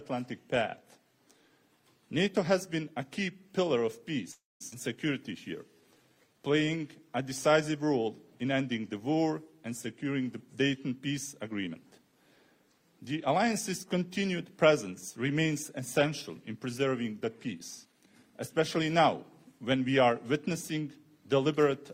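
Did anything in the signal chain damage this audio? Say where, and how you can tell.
Yes. The damage comes from the network and the receiver's jitter buffer, in four distinct ways.

At 4.31 s the sound stops and is carried on as a synthetic continuation that decays into about 200 ms of silence, resuming at 4.62 s with nothing lost. That 289 ms call audio freeze is most likely packets stalling in transit until the jitter buffer ran dry, with the receiver filling the wait and then picking up exactly where it stopped.

From 4.70 to 4.74 s there is a skip ahead. Roughly a fifth of a second of audio was dropped while later audio was already waiting. Playback jumps forward with only a 14 ms seam, and the material on either side is butted together almost directly.

Between 5.81 and 7.54 s a jitter buffer slow-down plays the audio at 88% speed. The buffer, running short, repeated individual pitch periods and pause fragments over and over, inserting 208 ms in total. 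Pitch stays put while timing stretches, so sounds are drawn out.

A jitter buffer speed-up occurs three times: 10.81 to 12.13 s at 108%, 17.25 to 18.94 s at 107%, and 19.45 to 19.89 s at 112%. Holding more audio than its target, the buffer snipped out short pitch-period slices, roughly 100 ms in each of the first two spans and about 50 ms in the last. The pitch holds but the pace audibly hurries.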